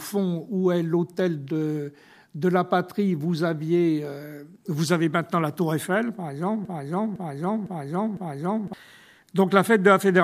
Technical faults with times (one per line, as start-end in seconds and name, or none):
6.65-8.73 broken-record loop